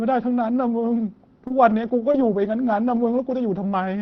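A brief smear at 1.47 to 1.52 s and again at 2.12 to 2.16 s is short concealed packet loss: about 20 ms of the call arrived too late each time, and the receiver stretched the preceding sound to cover the gap before blending back. From 1.50 to 2.98 s, twelve separate 20 ms moments sound rougher and noisier. Each is a lost packet rebuilt from error correction, with the decoder playing the low-bitrate backup copy carried in the following packet. Underneath all of this is the call path's coding texture, limited to about 6 kHz, which fits Opus at around 20 kbps.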